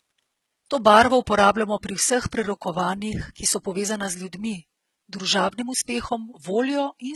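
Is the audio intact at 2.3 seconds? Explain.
No. At 2.31 s a short hiss smears in about 14 ms ahead of a sharp attack. This is pre-echo: block-wide quantisation noise, sized for the loud onset, spills into the quiet just before it. The speech here also has gritty, metallic sibilance, likely from heavy HE-AAC compression that rebuilds the treble from copied lower bands, pointing to a very low bitrate near 16 kbps.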